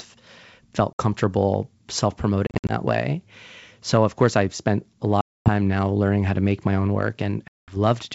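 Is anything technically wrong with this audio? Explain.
Yes. Packet loss on an ADPCM call occurs at 0.93–1.01 s, 2.47–2.73 s (scattered gaps), 5.21–5.49 s between "course I've spent a" and "now learning how to", and 7.48–7.76 s after "to make my own". Silence fills the lost packets, and the decoder's predictor and step size drift from the sender's, so audio resumes with a brief level or distortion error, at times with a click. Waveforms show flat, near-silent holes, and spectrograms show hard-edged vertical blank bands. The G.722 wideband coding itself sounds clean.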